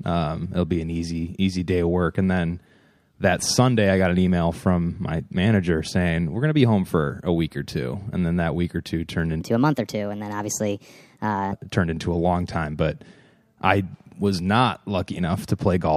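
It's a speech recording, and from 9.41 to 11.52 s there's a section at the wrong speed: it runs about 1.31 times fast, so the voice jumps up roughly five semitones and sounds hurried, most likely from that stretch being played against the wrong clock.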